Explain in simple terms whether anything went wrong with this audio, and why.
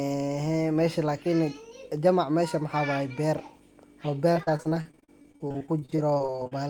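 From about 4.33 s to 6.53 s, the connection carrying this speech kept losing or delaying small chunks of audio: repeated packet loss (robotic sound). Close to thirty times, the receiver had nothing to play and covered each hole by stretching out the sound it had just heard, each patch lasting no more than about 41 ms. Roughly a third of that stretch is filler, so the voice turns choppy, with bits missing, until about 6.53 s.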